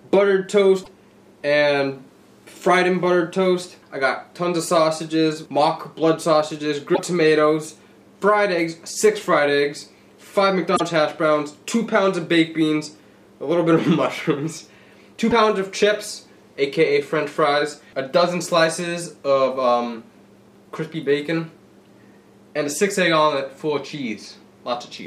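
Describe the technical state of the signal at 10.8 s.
At 10.75 s the audio jumps forward abruptly, and for about 56 ms, until 10.81 s, what plays is garbled rather than continuous sound. That span covers roughly two MP3 frames of about 26 ms each, and the likely cause is a broken MP3 bit reservoir. Frames were dropped at the cut, so the frames that follow reach back into earlier frames for their borrowed bits and decode bytes that belong to other frames.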